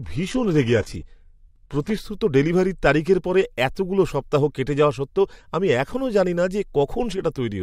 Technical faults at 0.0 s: adaptive stream starting at a low bitrate

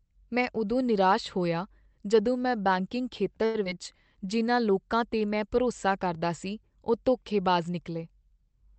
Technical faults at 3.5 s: short stall from a late packet

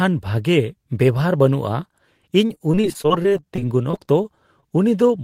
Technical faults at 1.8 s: none

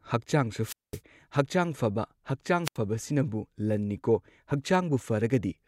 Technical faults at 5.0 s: none

